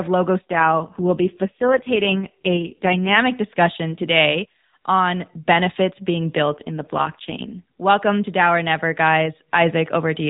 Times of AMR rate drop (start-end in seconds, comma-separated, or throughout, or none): 0.42-3.19, 6.51-7.62